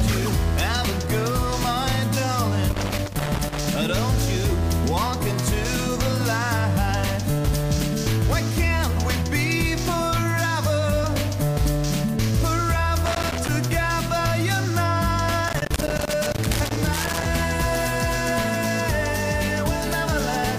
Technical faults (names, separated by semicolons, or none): loose connector crackle